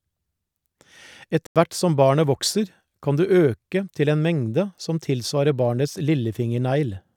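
At 1.47 s the speech drops abruptly into silence for about 0.09 s, ending at 1.56 s just before "hvert som barnet vokser". This is a corrupt frame muted: damaged compressed frames were rejected and replaced with silence, a gap that fits roughly three frames, with timing preserved.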